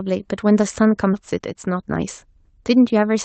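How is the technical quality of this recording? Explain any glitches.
The recording has two glitches, both typical of a call. It passed through a call codec, likely Opus, and has no content above about 8 kHz.

At 1.13 to 1.15 s there is a skip ahead. A stretch of audio, about 0.7 s long, was thrown away while later audio was already queued. Nothing fills the gap. Playback jumps straight from one side to the other. The sound before and after is butted together, so a chunk of the speech simply vanishes.

From 1.24 s to 3.06 s comes a jitter buffer speed-up. The buffer held more audio than it wanted. To shrink that backlog, the receiver cut out many tiny slices, each a pitch period or so long. In total about 0.15 s was removed. Speech runs at about 107 percent speed with unchanged pitch. It sounds slightly hurried until just past 3 s.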